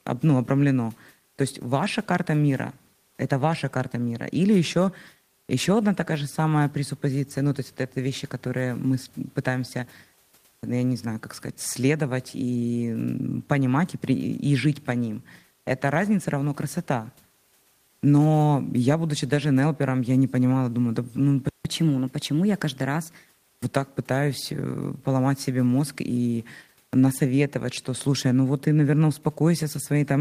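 Just after "понимала думаю да ну", at 21.49 s, the speech cuts out completely for 0.16 s, until 21.65 s. This playback stall is most likely the player running out of buffered data or its output thread being blocked. The speech then resumes where it stopped.

From 21.65 to 23.26 s, ending just before "вот так пытаюсь э", the player does a catch-up at higher speed, resampling to 1.1 times normal speed to recover the lost time. The speech sounds hurried and raised by about one and a half semitones, then drops back to normal pitch and pace. The room noise, about 41 dB below the speech, continues beneath it.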